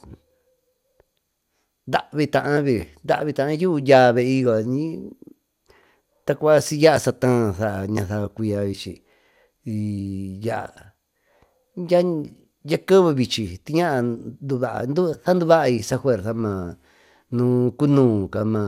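No dropouts, clicks, distortion or level jumps turn up anywhere in the recording; nothing to report.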